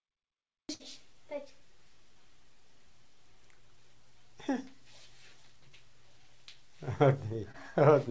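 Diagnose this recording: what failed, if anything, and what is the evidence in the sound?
Network stage: a burst of packet loss dropped about 60 ms. From 0.74 to 0.82 s the receiver stretches and fades the last sound, then skips ahead.

Network stage again: short concealed packet loss of 20 ms. At 7.52 to 7.56 s the gap is filled by continuing the previous sound, heard as a brief smear through the G.722 path's 8 kHz band.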